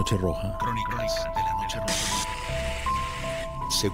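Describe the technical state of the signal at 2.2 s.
At 2.2 s the signal carries sample clock jitter, present across the whole clip. The converter's timing wanders by a few microseconds, so each sample lands slightly off; steep waveform slopes turn that into an error roughly 25 dB below the signal, heard as hiss tracking loud, bright passages.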